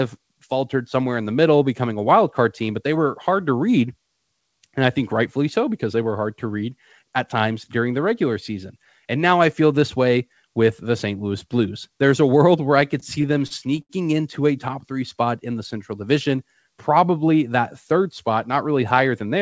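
Speech, run through a call path whose top end stops at 8 kHz, which fits G.722. Between 13.00 and 13.91 s, just after "world where I could" and before "into a top three", there's a case of repeated stalls (stutter). The jitter buffer kept running dry as packets arrived late, so the receiver stretched the last bit of sound to fill seven gaps, the longest 76 ms, adding up to 173 ms, about a fifth of that stretch. Nothing actually drops out, but the phrase drags and stutters.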